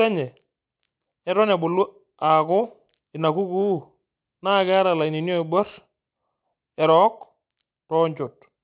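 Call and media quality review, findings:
Sibilants gritty and metallic across the whole clip, energy running hard up to a 4 kHz band edge. Aliasing: the sound points to an unfiltered downsample to 8 kHz, folding content above 4 kHz back as wrong pitches, roughly 30 dB below the speech.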